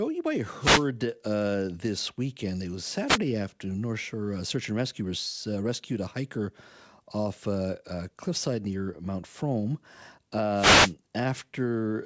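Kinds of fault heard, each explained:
Wireless microphone noise hit: the analogue FM radio link fades when reflected paths cancel the direct signal, letting receiver noise surge up as a brief swish of static over the speech. It happens three times: at 0.56–0.87 s, between "might have" and "uh this weekend", then at 3.06–3.18 s and 10.54–10.94 s. Each burst is heard through the call path's band limit at 8 kHz, which fits G.722.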